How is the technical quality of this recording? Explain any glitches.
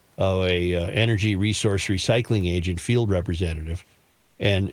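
One glitch stands out, near the end of the clip. From 4.11 to 4.39 s, a stretch of 280 ms, the background is replaced by comfort noise. The room noise, which sits about 40 dB below the speech, gives way to a steady, featureless hiss about 3 dB quieter. The likely cause is discontinuous transmission in an Opus-style codec: once the sender's voice detector judges the signal to be silence, it stops sending full audio, and the receiver synthesises noise roughly matched to the background's spectrum. The background sits about 43 dB below the loudest passages, and the real room texture flattens until transmission resumes.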